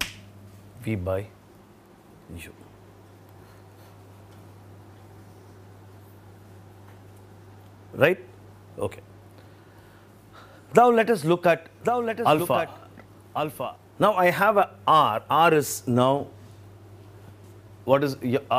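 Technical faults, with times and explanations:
11.84 to 13.76 s, doubled audio track: a full-band second copy of the sound trails the original by about a second, roughly 10 dB quieter, with no decay or room colour and abrupt edges, likely from a slower second capture path mixed back in.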